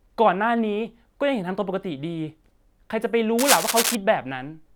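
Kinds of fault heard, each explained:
Cable scratch noise: A burst of dense, ragged crackle runs from 3.39 to 3.95 s, just over half a second. It sits on top of the speech at roughly the same loudness, so it is hard to ignore. The texture is uneven, like rustling or scraping rather than a steady hiss. This likely comes from a worn cable or connector being moved. Its contact resistance would then jump about rapidly and add these irregular noise bursts.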